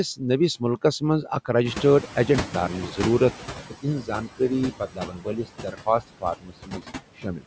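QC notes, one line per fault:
Throughout: noise suppressor artifacts. The suppressor is pulling down whatever bands it reads as steady noise, about 12 dB worth, and it decides frame by frame, so the background dips in the gaps and swells back up under the talking.
1.65 to 3.67 s: noise suppressor catching up. The room noise jumps by about 14 dB just before this, and the suppressor's noise estimate is still tuned to the quieter level. So the louder background comes through with less reduction at first, then sinks over roughly two seconds (2.02 s) as the estimate adapts and the full cut of about 12 dB kicks back in. The jump is the room itself, not the system. Only the slow reaction is the fault.
4.01 to 4.41 s, 4.71 to 5.47 s, 5.63 to 6.82 s, and 7.16 to 7.45 s: speech cut by the noise suppressor. Here the suppressor mistakes parts of the speech for noise and turns them down along with the background, by about 16 dB in the first stretch and about 18 to 19 dB in the later ones. 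Softer consonants, word endings and quieter bits come out swallowed or faint. The two middle runs lose about half a second each, and the first and last about a fifth of a second.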